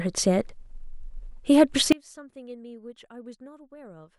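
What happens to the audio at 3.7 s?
At 3.7 s the speech is inside an audio dropout to a faint residue that begins abruptly at 1.92 s and runs to the end of the clip. The wanted signal drops away in mid-flow and leaves only a faint leak, something like 30 dB below its normal level. The path after the break is likely still live, passing a trace of signal where a true mute would give silence. Unlike a pause or fade, the change is a sudden step.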